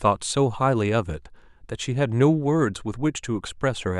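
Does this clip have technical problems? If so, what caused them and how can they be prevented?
No, there's nothing technically wrong to point to here, so there's no cause to track down and nothing to prevent this time.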